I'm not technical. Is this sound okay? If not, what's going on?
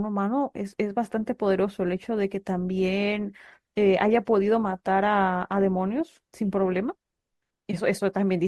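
No. Between 1.17 and 7.17 s, the adaptive stream switched to a lower bitrate. The speech suddenly sounds more processed, though it never breaks off.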